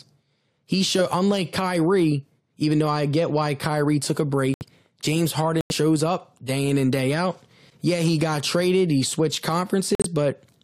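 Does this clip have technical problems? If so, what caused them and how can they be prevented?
Yes: corrupt frame muted, three times, at 4.54 to 4.62 s after "took a", at 5.61 to 5.72 s before "up day in and", and at 9.95 to 10.06 s after "got traded he switched". Damaged compressed frames were rejected by the decoder and replaced with silence, leaving abrupt gaps of roughly 80 to 110 ms while timing stays intact. On a waveform each gap is a flat line; on a spectrogram it is a sharp-edged blank column across all frequencies. Preventing it means protecting the stream with error detection plus retransmission or forward error correction, and having the player conceal lost frames instead of muting them.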